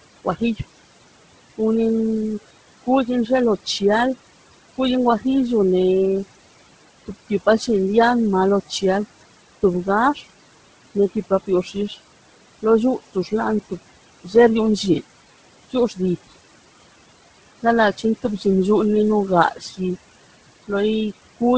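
Throughout the speech, the room noise, sitting about 17 dB below the voice, dips in the gaps and swells under syllables: noise suppressor artifacts, pulling the background down by about 18 dB frame by frame. The voice also has a breathy, grainy top end, likely from heavy Bluetooth LC3 compression in 10 ms frames, which fits a low bitrate near 16 kbps. Its band ends at 8 kHz, as expected from call microphone processing.

From 2.84 to 3.81 s, brief consonants and word endings sound swallowed. This is speech cut by the noise suppressor, which mistook them for noise and lowered them by up to about 14 dB. Between 8.69 and 14.34 s the same fault returns over roughly half a second in total, with drops up to about 15 dB.

From 14.94 to 14.98 s, a jumbled blip is heard. These are chunks out of order: a 20 ms piece plays one chunk late, leaving hard joins.

Further speech cut by the noise suppressor follows at 15.71–16.29 s (up to about 17 dB), 17.63–18.45 s (about 12 dB), and 19.51–21.41 s (about 12 dB), where short stretches sound faint or clipped away.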